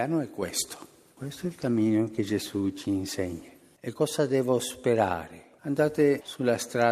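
From 1.23 s to about 3.55 s there is a call bitrate drop: the bandwidth estimate fell and the encoder went from 64 kbps to 20 kbps, staying at that lowest rate for about 2.26 s. With so few bits the sound is coded more coarsely and turns rough, watery or muffled, then clears once the rate recovers. On a spectrogram that stretch looks patchier and less detailed than the audio on either side.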